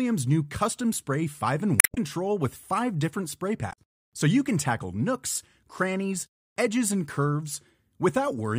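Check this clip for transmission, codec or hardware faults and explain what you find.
There are two faults, both damaged data in a compressed stream. The first runs from 1.77 to 1.98 s, just before "with five different spray"; the second runs from 3.69 to 3.78 s, just after "with five different spray". Corrupted frames make the decoder lose sync and hunt for a valid header, which breaks the audio briefly at each of these points.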